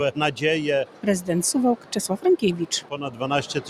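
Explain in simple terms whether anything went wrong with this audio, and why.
Something did go wrong. A noise suppressor applied to music or sounds was left running, even though it was built for speech. It treats anything steady, such as held tones, background ambience or the tail of a reverb, as unwanted noise and pulls it down. Sharp attacks slip through, but sustained parts keep sinking and recovering, so the level pumps up and down and the sound comes across thinner than it should.

On two occasions the sound was cut by the noise suppressor more heavily than elsewhere: from 0.85 to 1.05 s and from 1.76 to 1.94 s. Each lasts about a fifth of a second. In those moments the suppressor mistook the audio for noise and pushed it down hard, so the sound dips sharply in loudness and any fading tail is chopped short before it finishes.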